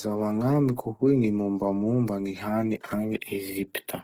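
A short speech recording carries plainly audible Opus compression from start to finish. The audio keeps its full bandwidth, with content reaching about 20.4 kHz, but the tonal parts sound grainy, rough and noisy rather than swirly or hollow. That texture comes from a music-mode encoder holding each band's energy while filling detail with folded or noise-like content. It likely points to Opus at a low bitrate, around 16 kbps.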